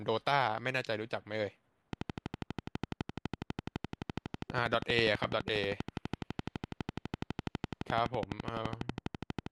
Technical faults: train of clicks

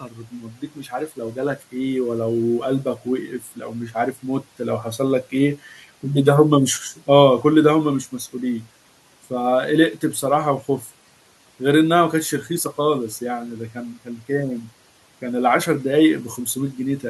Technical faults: speech cut by the noise suppressor

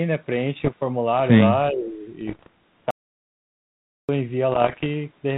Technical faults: bit errors on an ADPCM link; speech suppressed in double talk; audio dropout to silence

